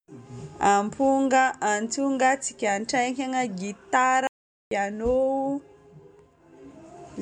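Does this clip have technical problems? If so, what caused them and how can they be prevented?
Yes. A playback stall runs from 4.27 to 4.71 s: the speech cuts out mid-flow and the output falls silent for about 0.44 s before the sound comes back. A gap this long points to a player that was starved of data or whose audio thread was blocked. Output stays silent until the buffer refills. Larger playback buffers and keeping blocking work off the audio thread would prevent it.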